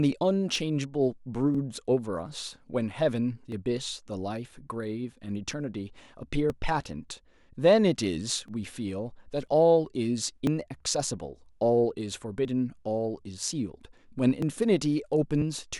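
Speech recording with periodic USB or driver dropouts from 0.56 s to 15.42 s. About every 0.99 s, around 10 ms of audio is skipped outright, producing roughly fifteen evenly spaced ticks where the stream jumps forward. This points to a background task repeatedly stalling the audio driver or bus.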